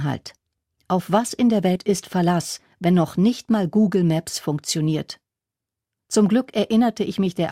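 Right after "was in der", at about 1.75 to 1.78 s, there's a case of compressed frames skipped. A few whole frames never reached playback, either missing from the stream or thrown out by the decoder as damaged, so the speech jumps forward by something like 70 ms, which fits about three 20 ms frames.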